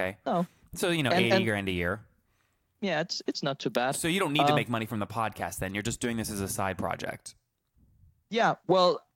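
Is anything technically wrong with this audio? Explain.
No, nothing technically wrong turns up anywhere in this bit of speech, so there's no fault to walk through.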